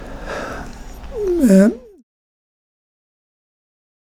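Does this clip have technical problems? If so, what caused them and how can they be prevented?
No, there's nothing wrong here, just a smooth fade-out on the speech that begins at around 1 second and finishes by 2.03 s, the sort of gentle editor's fade with no click or hard edge, so there's nothing to fix or prevent.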